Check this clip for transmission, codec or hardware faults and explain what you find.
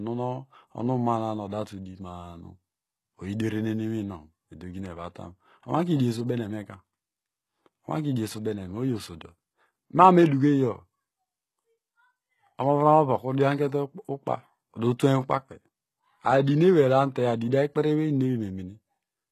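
There is one fault, present from start to finish. The speech sounds heavily processed: sibilants come out gritty and metallic, almost lisped, and the treble is synthetic, stopping dead at about 12.3 kHz. This is likely HE-AAC compression at a very low bitrate, in the region of 16 kbps. The codec spends its bits on the lower spectrum and fakes the top by copying lower bands upward under a coarse envelope, so harmonics fail to line up across the join.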